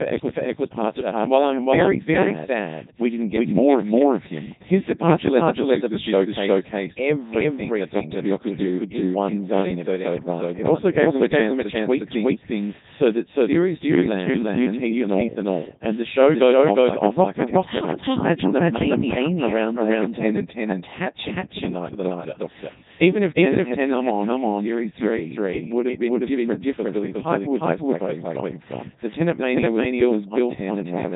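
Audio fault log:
Throughout: doubled audio track. A second full-band copy trails the speech by roughly 400 ms at about the same level, with no decay or room colour on it, so everything lands twice. It's likely a slower second capture path getting mixed back in.
Throughout: Codec 2 vocoder. The speech is heavily buzzy and robotic, rebuilt from sine waves using only pitch, voicing, energy and envelope, so the original waveform is gone. Nothing sits above 3.8 kHz, and the sound fits Codec 2's top 3.2 kbit/s mode.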